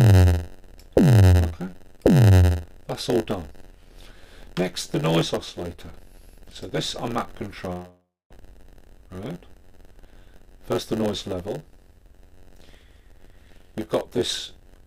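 From start to finish there's a block size mismatch (padded). One stage hands over blocks shorter than the next one reads and the remainder gets zero-filled, so you hear a buzz at 91.9 Hz and everything plays at 0.919 of normal speed with the timbre unchanged.

From 7.72 to 8.33 s the last sound is carried on as a fading fill for roughly half a second, drops to near silence for about 210 ms, then resumes with around 400 ms missing. That's likely a long network dropout, with the later timing shifted by something like 150 ms.

Right after, from 8.42 to 9.33 s, a jitter buffer speed-up drains the backlog. Short pitch-period chunks are cut, adding up to about 50 ms, so the audio runs at 105% speed, hurried but same pitch. It happens again from 10.42 to 11.59 s at 107%, trimming about 70 ms.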